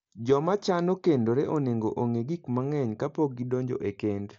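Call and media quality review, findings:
No faults found in the speech; the Bluetooth mSBC headset path is audible as expected, with content running out near 7.7 kHz.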